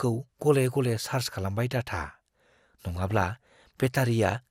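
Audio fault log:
2.84–3.81 s, DAB burbling: weak-reception bit errors slip past error correction, so single sub-bands jump in level frame by frame, bubbling and chirping over the speech.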